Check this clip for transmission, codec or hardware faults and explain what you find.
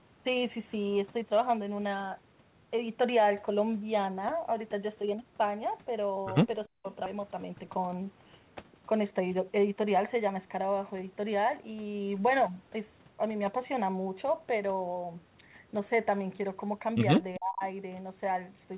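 Yes, the speech shows three kinds of fault: two brief suppressions, one forward jump, and two stretches of sped-up playback. All of it sits inside a narrow telephone band, with nothing above 4 kHz, which fits a G.711 mu-law call path.

Speech suppressed in double talk, 6.67 to 6.86 s and 17.37 to 17.63 s. The talker's level collapses by about 40 dB in the first event and about 35 dB in the second, for roughly a fifth and roughly a third of a second. The likely cause is an echo canceller that could not tell the near talker from loudspeaker echo while both sides spoke, so it turned the whole signal down. The speech briefly drops almost to silence and then returns.

Skip ahead, 7.06 to 7.08 s. Roughly 0.7 s of speech is missing, and nothing fills the gap. A stretch of audio was dropped while later audio was already waiting, so playback joins the audio before and after the missing stretch almost directly. 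The talker seems to jump forward, with sounds clipped off and no pause to mark the cut.

Jitter buffer speed-up, 7.16 to 8.02 s at 108% and 8.93 to 10.65 s at 105%. The buffer was holding more audio than its target, so it trimmed many pitch-period-sized slices in a row, roughly 70 ms and 100 ms in total. Pitch stays unchanged while the speech runs faster, giving a hurried, compressed rhythm right after the skip.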